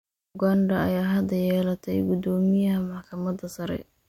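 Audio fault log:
No faults were found in this speech clip.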